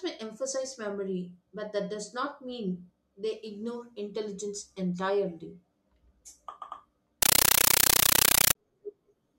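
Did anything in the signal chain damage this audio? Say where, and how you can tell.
Yes. At the playback link, 7.22 to 8.55 s, the speech becomes loud chattering static: a compressed stream played as audio. Bursts of about 9 ms recur 31.25 times a second with silent padding between, which fits undecoded AC-3 frames. Ordinary noise wouldn't pulse that regularly.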